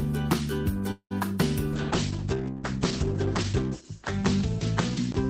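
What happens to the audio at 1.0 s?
A call audio freeze runs from 0.91 to 1.13 s, likely because packets stalled in transit and the jitter buffer ran dry. The receiver stretches the last sound into a fading buzz or hiss that falls to near-silence for its final 90 ms, filling about 190 ms in all. When the packets arrive, the audio picks up exactly where it stopped. Nothing is lost, but everything after the freeze plays about 190 ms later.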